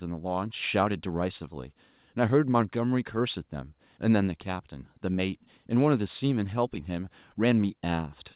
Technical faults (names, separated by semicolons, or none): none